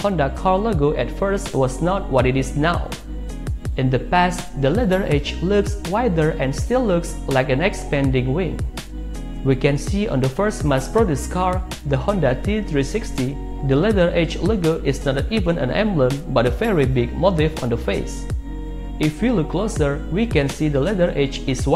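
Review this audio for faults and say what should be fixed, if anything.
Nothing in this audio needs to be fixed, as no faults can be heard.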